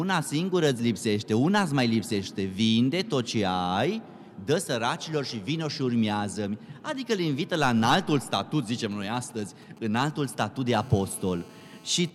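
From 8.84 to 10.58 s the audio carries GSM signalling bursts, a galloping dit-dit-dit of short 217 Hz buzzes roughly 25 dB under the programme. A nearby 2G phone is sending brief groups of radio bursts while signalling, and the audio circuitry rectifies them into sound. From 10.68 to 12.1 s this becomes GSM phone buzz, a hard, raspy, steady 217 Hz buzz rich in harmonics, about 27 dB below the signal and unrelated to it. It comes from a 2G phone in a call, transmitting 217 bursts per second that the circuit again demodulates.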